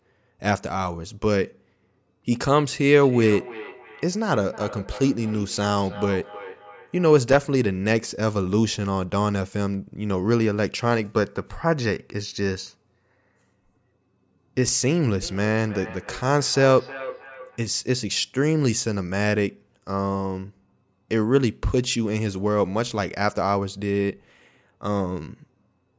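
From 2.97 to 7.2 s and again from 15.22 to 17.66 s, the speech comes back as a ringing repeat roughly every third of a second, peaking about 15 dB below the speech. This is feedback echo between two devices: a second device's speaker reaches this microphone, and neither echo canceller removes it.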